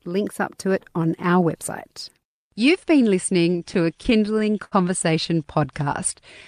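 From 3.53 to 4.74 s, repeated stalls (stutter): the jitter buffer ran dry 14 times, the longest gap 72 ms, so the speech drags and stutters. A spectrogram shows short smeared, repeated segments. Then from 5.58 to 6.20 s, a jitter buffer slow-down repeats pitch periods, adding 41 ms and playing at 95% speed, with no pitch change. The waveform shows near-identical cycles stretched in a row.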